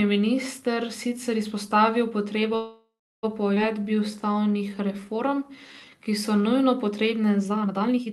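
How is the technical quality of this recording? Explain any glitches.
The recording has four audible timing faults that disturb its flow. The audio is band-limited to about 12 kHz with coding noise, consistent with Opus at around 32 kbps on a call path.

From 2.55 to 3.25 s there is a call audio freeze. The last sound is stretched into a fading buzz or hiss, then about 0.34 s of silence, before the speech resumes where it stopped. The likely cause is delayed packets draining the jitter buffer, leaving the receiver to conceal the gap. About 0.68 s was inserted and nothing was lost.

At 3.55 to 3.58 s there is a skip ahead. Playback jumps forward with only a 10 ms join, and roughly 0.4 s of speech is missing. This happens when a block of audio is dropped while later packets are already queued, so the material on either side of the cut is spliced almost directly and the sentence lurches forward.

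From 3.77 to 6.60 s there is a jitter buffer slow-down. Speech runs at about 86% speed at unchanged pitch, adding roughly 0.42 s. The buffer rebuilds its reserve by repeating individual pitch periods and pause fragments, so sounds drag and pauses lengthen.

From 7.37 s to the end there is a time-stretched section. Pace jumps abruptly to about 1.72 times normal speed, while the pitch stays the same. The likely cause is software compressing the passage to fit a length by discarding short segments, which makes the speech sound rushed.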